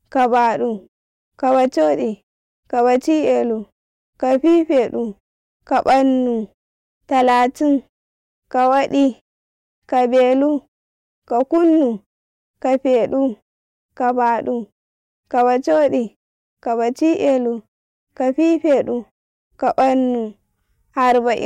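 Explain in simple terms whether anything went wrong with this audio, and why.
Hard clipping runs through the whole speech clip. The signal was pushed louder than the recording stage could handle, so the loudest peaks got sliced flat. Only a small share of the sound is affected, which is why you hear brief crackles on loud moments rather than constant fuzz. The quiet gaps between phrases drop to silence as intended.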